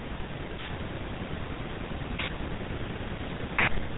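From start to finish the speech carries GSM full-rate codec damage, plainly audible as a buzzy, gravelly roughness. The codec rebuilds the voice from a vocal-tract filter excited by sparse, evenly spaced pulses, consistent with a 13 kbps stream, so fine detail in the excitation is lost. On a spectrogram the energy stops abruptly at 4 kHz, and the harmonics below look smeared and grainy rather than cleanly striated.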